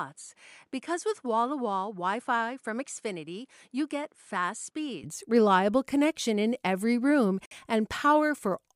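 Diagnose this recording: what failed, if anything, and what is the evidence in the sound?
A poorer input device was likely switched in at the driver stage. Before 5.04 s, speech is cut off above 11.4 kHz and sits about 5 dB quieter.

A Bluetooth stall on the wireless link likely drained the headphones' buffer. At 7.46 s the sound drops out for 56 ms, then resumes.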